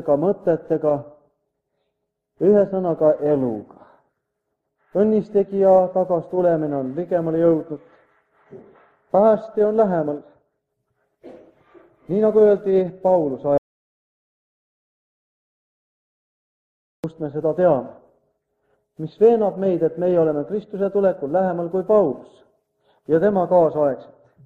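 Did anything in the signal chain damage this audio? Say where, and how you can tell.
Yes. An audio dropout to silence runs from 13.58 s to 17.04 s, about 3.46 s of silence with no room tone. The sound cuts off and resumes abruptly. The stage is most likely input capture, where a lost device or link left the recorder writing silence.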